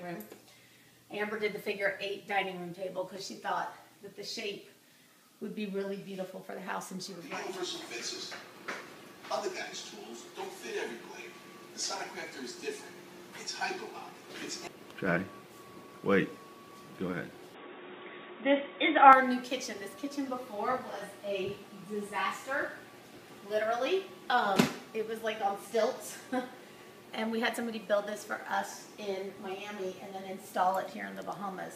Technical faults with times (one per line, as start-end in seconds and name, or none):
17.54-19.13 input switched to a poorer device